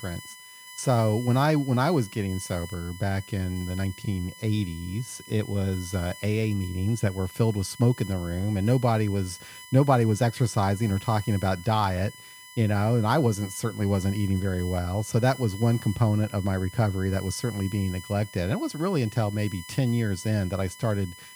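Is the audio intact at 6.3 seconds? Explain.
No, USB whine runs through the whole clip, including 6.3 s: a steady 1 kHz whine, loudest at 2 kHz, roughly 20 dB under the speech, from USB frame current leaking through power or ground.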